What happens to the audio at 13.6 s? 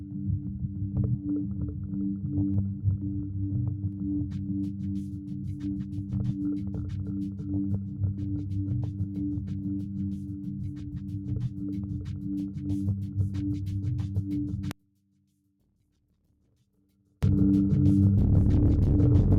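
At 13.6 s you're hearing the noise suppressor applied to music or sounds, though it isn't a one-off. It runs through the whole clip. A speech-tuned suppressor is treating sustained tones, ambience and reverb as if they were noise, so it keeps pulling them down by about 10 dB while the attacks slip through. Around that moment, held parts and tails sink and then bounce back, giving a pumping, fluttery, thinned-out sound.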